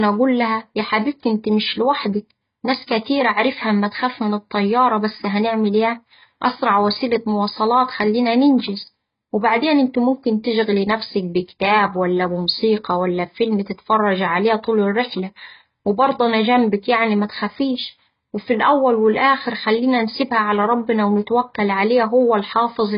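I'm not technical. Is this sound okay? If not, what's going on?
No. From start to finish the speech sounds heavily damaged and dull, as if heard through a cloth: everything above about 5.1 kHz is missing, so the crisp top end of the sound is gone. The likely cause is strong AAC compression. To make the file very small, the encoder discards the high frequencies and spends only a few bits on what remains, roughly reproducing some parts and leaving gaps in others.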